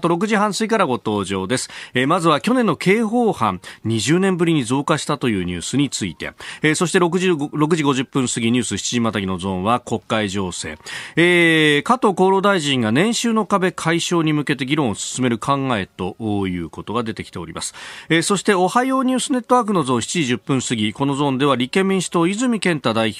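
Nothing stood out as a technical fault on listening to the speech.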